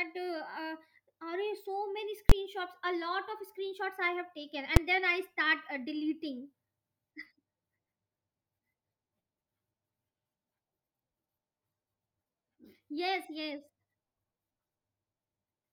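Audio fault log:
2.30 to 2.32 s and 4.76 s: invalid numbers at full scale. At two points in the speech, a calculation produced infinite or invalid values. The output was forced to its largest level. The first block lasts about 20 ms. The second lasts about 5 ms, just before "then I start uh". Both blocks are this short, so each is heard as one sharp bang. The signal jumps to one extreme value, far beyond the speech peaks, and falls back almost at once.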